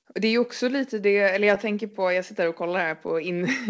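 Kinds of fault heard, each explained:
Clock drift between sender and receiver: a sender clock about two percent slow drains the buffer, causing small repeated hiccups at uneven intervals throughout, not one isolated event.
Short stall from a late packet: from 0.02 to 0.08 s the sound is held about 30 ms, then resumes with nothing missing, unlike a dropout.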